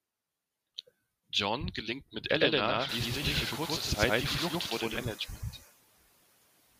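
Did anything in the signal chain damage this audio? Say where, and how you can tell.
Yes. In call processing, noise suppressor artifacts run throughout. Steady noise is cut by about 19 dB, so the background dips between phrases and rises under speech, most clearly once room noise rises near 3 s.

From 2.31 to 5.03 s, just after "gelingt mit", there is a doubled audio track. An equally loud, dry copy trails by roughly a tenth of a second and starts and stops abruptly, likely from a second, slower capture path.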